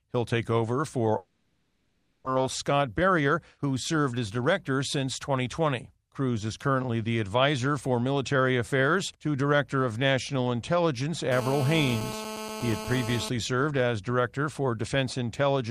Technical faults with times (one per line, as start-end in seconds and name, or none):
1.17-2.37 long network dropout
2.87-3.66 jitter buffer speed-up
11.32-13.29 GSM phone buzz